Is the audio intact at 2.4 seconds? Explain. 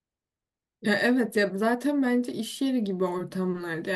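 Yes, the audio is intact at 2.4 seconds, with no fault present at that moment.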